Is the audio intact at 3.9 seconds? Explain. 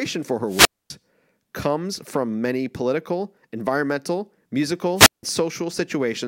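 Yes, the speech at 3.9 seconds is intact, with no audible dropout, click, distortion or other fault at that moment.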